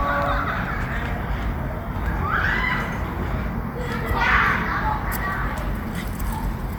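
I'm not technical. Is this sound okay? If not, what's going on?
No. From start to finish the sound has a grainy, breathy fizz on its bright upper edge. That points to likely Bluetooth LC3 compression. Unlike simple muffling, the top end doesn't disappear; the codec fills it with noise that only imitates the original detail.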